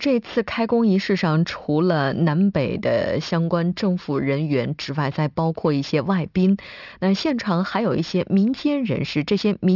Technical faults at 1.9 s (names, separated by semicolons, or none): aliasing